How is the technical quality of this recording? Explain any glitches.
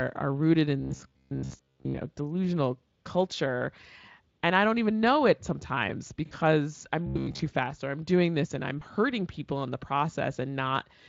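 It's speech with two kinds of glitches, each showing up twice, over what sounds like a Speex-coded voice stream with only light codec colouring.

Robotic sound from repeated short buffers hits at 0.80 to 2.01 s and again at 7.06 to 7.44 s, just before "fast or I'm doing". The voice goes rigid and metallic, with a fixed buzz around 66.7 Hz laid over it while the words stay roughly trackable. That buzz period is 15 ms. The likely cause is audio arriving too slowly, with the player looping the last 15 ms chunk to fill the gap. Most of each stretch is repeated material rather than fresh audio, which is why it sounds like a machine.

VoIP packet loss concealed by the speech codec shows up at 6.25 to 6.35 s, right after "even know it sometimes", and at 8.79 to 8.83 s, between "doing this and I'm" and "hurting people in the". The first gap is about 60 ms, which fits three 20 ms frames going missing. 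The second is about 20 ms, roughly one frame. The decoder bridges each hole by extending the last pitch and spectral shape at falling gain, so you hear a brief stretched smear that fades. The voice takes a moment to firm up again afterwards.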